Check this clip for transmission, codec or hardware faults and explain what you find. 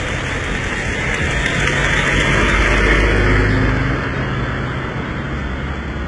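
One codec fault runs through the whole clip: likely HE-AAC compression, heavy, consistent with about 12 kbps. Replicated treble sounds gritty and metallic; a spectrogram shows copied, misaligned upper bands and nothing above 10.8 kHz.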